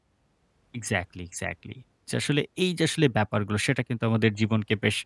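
Nothing technical goes wrong anywhere in this short bit of speech, so there are no times or causes to point to.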